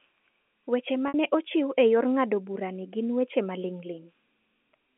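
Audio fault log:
1.08–1.14 s, packet loss with pitch repetition: about 60 ms missing, bridged by a repeated pitch period before "ne ochiw e yor", heard as a brief buzzy hold.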